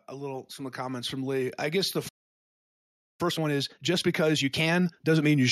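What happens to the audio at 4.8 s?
At 4.8 s two things overlap. There's time-compressed catch-up running from 3.21 to 5.39 s: after a stall the player is trimming its backlog by cutting out small slices and cross-fading the joins, so the speech comes out hurried, about 1.5 times normal speed, still at its natural pitch. Underneath that, automatic gain is still rising, a slow swell that began at 0.09 s and runs to 5.49 s. The gain control judged the input too quiet and keeps turning it up, about 11 dB overall, so by this point the voice and the background noise are both louder together.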